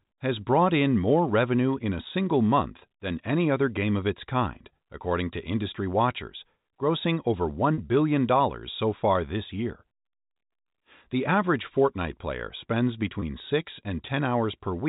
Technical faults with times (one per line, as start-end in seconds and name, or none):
7.74-7.78 packet loss with pitch repetition
13.20-13.22 packet loss with pitch repetition